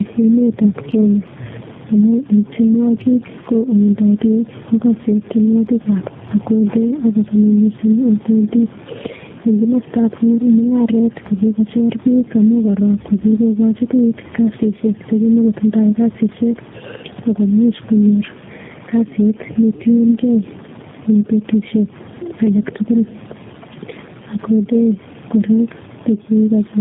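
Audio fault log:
Throughout, gain pumping: the level rises and falls by roughly 10 dB. Loud and soft passages sit close together and the sound feels squashed. This is likely a microphone gain set far too high with a fast limiter or compressor dragging it back on each peak. The room noise sits about 31 dB below the speech.
Throughout, tandem speech coding: the speech sounds rough, muffled and warbly, and nothing remains above 3.8 kHz. The character fits a G.729A-type coder at the last stage, working on material already degraded by earlier speech codecs, about three in a row, with each coder adding its own artefacts to the last one's errors. A single low-rate codec would be cleaner. The stacked roughness and layered warble point to repeated decoding and re-encoding across links.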